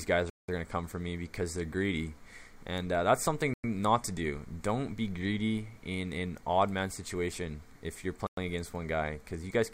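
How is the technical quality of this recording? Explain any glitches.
The recording is interrupted by three dropouts, at 0.30 to 0.49 s, 3.54 to 3.64 s and 8.27 to 8.37 s. Each is a flat gap lasting 187, 104 and 104 ms. The sound goes silent and then resumes, which points to a likely Bluetooth stall: packets were delayed, the receiver's buffer emptied, and playback paused. On a waveform each gap appears as a flat line, and on a spectrogram as a blank vertical band.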